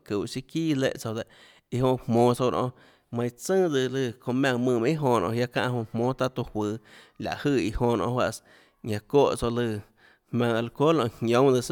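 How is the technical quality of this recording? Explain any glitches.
No glitches or technical faults are audible here.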